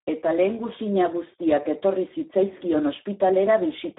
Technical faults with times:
0.00-3.98 Speex codec

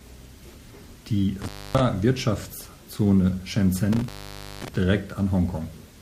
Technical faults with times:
1.42-1.80 intermittent contact
3.93-4.76 intermittent contact

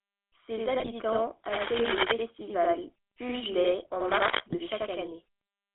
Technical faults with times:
0.00-5.74 channel delay (doubling)
0.00-5.74 GSM full-rate codec
0.80-0.89 GSM bit errors
1.52-2.03 cable scratch noise
4.00-4.32 cable scratch noise
4.48-4.56 GSM bit errors

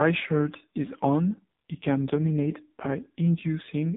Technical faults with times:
0.00-3.97 AMR narrowband mobile codec

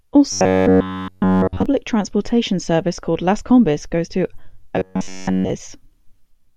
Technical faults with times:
0.32-1.66 robotic sound from repeated short buffers
4.76-5.50 robotic sound from repeated short buffers

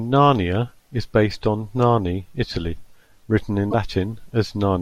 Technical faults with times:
3.70-3.74 damaged data in a compressed stream

